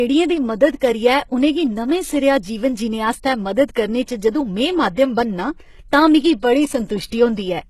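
Throughout the speech, the treble sounds synthetic, with nothing above 12.3 kHz. The likely cause is HE-AAC compression at a low rate, which fits about 16 kbps. Upper bands are copied from lower ones, so s sounds turn gritty and lispy.

Pre-echo appears at 4.95 to 4.97 s and 7.08 to 7.12 s. The codec spread its noise across each block, so hiss leaks about 23 ms and 43 ms ahead of sharp attacks. Those attacks sound softened and smeared.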